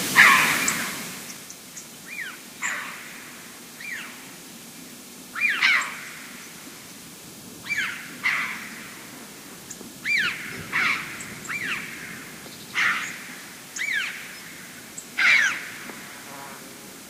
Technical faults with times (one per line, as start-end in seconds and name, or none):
none